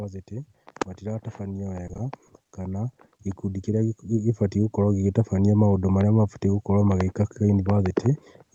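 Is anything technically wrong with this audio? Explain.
Yes. From 1.87 to 2.31 s the speech turns choppy and robotic, with short bits dropped. This is repeated packet loss: several brief holes, none longer than about 20 ms, each patched by stretching the preceding sound, concealing roughly a fifth of that stretch.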